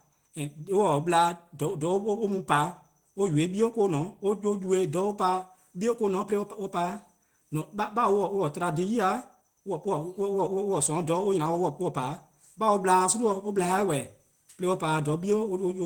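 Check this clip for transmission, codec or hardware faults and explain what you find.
Nothing found on listening: no faults are audible anywhere in the speech.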